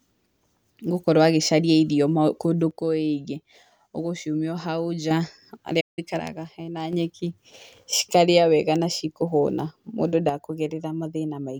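At 2.71 s the speech level drops abruptly by about 6 dB and stays down until 5.11 s. This is one channel dropping out, most likely a stereo channel lost before the mono sum, so only half the shared signal survives. It differs from a fade or gain ride because the step is instant and exact, with no change in tone, and it ends just as sharply.

At 5.80 s the speech stops dead for 167 ms, then picks up at 5.99 s. This is a playback stall, likely the player starving for data or its thread being blocked. Unlike a packet-loss gap, no noise or smeared fill covers the silence. The sound simply freezes and then continues.

The same 6 dB channel drop returns from 6.20 s to 6.93 s, again likely a lost channel, with sharp steps down and back up. It occurs once more from 10.29 s, this time likely the same channel loss, and never recovers before the clip ends.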